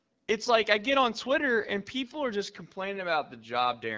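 There are no technical faults to describe at any point in this speech clip.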